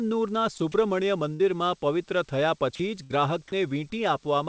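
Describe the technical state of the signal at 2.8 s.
From 2.75 to 2.79 s, about 40 ms, the speech gives way to a flat, steady hiss before resuming. That is sound dropped by the voice detector, likely from the sender judging the sound there to be background and the receiver filling the gap with comfort noise. Unlike a packet-loss dropout, the gap holds a smooth noise floor rather than a click, silence or smeared repeat, and that hiss stays within the same 8 kHz band as the call audio around it.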